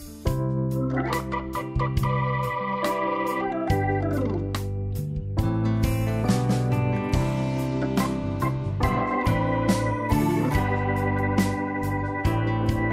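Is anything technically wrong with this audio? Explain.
No, nothing technically wrong can be heard here, as the signal stays steady and intact throughout without any audible disturbance.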